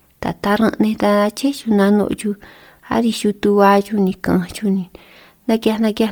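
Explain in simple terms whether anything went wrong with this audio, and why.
The whole clip has a breathy, grainy edge on the speech, likely from heavy Bluetooth LC3 compression throwing away fine detail and patching the gaps with noise.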